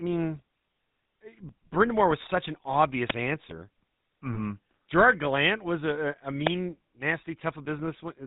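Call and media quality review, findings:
GSM full-rate codec throughout: buzzy, gravelly voice with nothing above 4 kHz. Coarse pulse excitation, damage consistent with the 13 kbps full-rate mode.

Wireless microphone noise hits at 3.06–3.15 s and 6.44–6.50 s: short swishes of static. FM link fading, receiver noise briefly rising.

Lost GSM frames at 4.34–4.38 s: brief rough, metallic ring. Decoder repeated the last good frame's settings to cover a single dropped frame.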